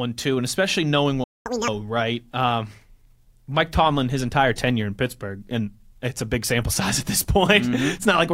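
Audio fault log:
1.24–1.46 s: playback stall. Sound cuts to silence for about 220 ms right after "too and especially knowing", likely from the player running dry or its thread blocking.
1.46–1.68 s: catch-up at higher speed. The backlog plays at 2x speed via resampling, raising pitch by roughly ten semitones, then returns to normal rate.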